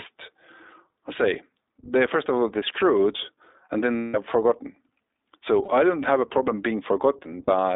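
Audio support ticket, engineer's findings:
Whole clip: iLBC codec, narrowband. Band sits roughly 300 Hz to 3.7 kHz, nothing above 4 kHz, so speech sounds boxed in and thin. Damage plainly audible: rough, slightly synthetic texture, which fits a 15.2 kbps mode with 20 ms frames. Each frame codes its excitation on its own, without leaning on the frame before.

Lost iLBC frames, three spots. 3.96–4.17 s, right after "all they screwed and": about 180 ms of held, buzzy vowel as the decoder loops the last pitch cycle with noise, fading toward the end. 5.64–5.70 s, just before "I don't have a": short 40 ms buzz. 7.44–7.52 s: another 40 ms smear. Frames stand alone, so speech snaps back almost immediately after each.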